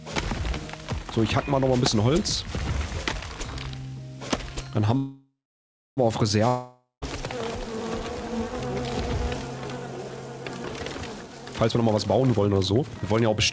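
At 4.97 s a call audio freeze begins, likely from held-up packets draining the jitter buffer. The last sound stretches into a fading buzz, then about 0.65 s of silence. On a spectrogram this looks like smeared, fading bands before a blank patch. At 6.00 s the audio resumes exactly where it stopped, now a second later.

From 6.48 to 7.05 s a long network dropout cuts out about 0.54 s of audio. A brief decaying buzz turns into roughly 0.16 s of flat-line silence, and the audio returns further on with that stretch missing.

From 11.16 s to the end, a jitter buffer speed-up makes the audio hurried. It plays at 127% speed with unchanged pitch, as many tiny pitch-period slices, about 0.7 s in total, are removed. The waveform looks compressed in time, while harmonic spacing on the spectrogram stays the same. Across the whole clip, the call path's G.722 coding leaves nothing above 8 kHz.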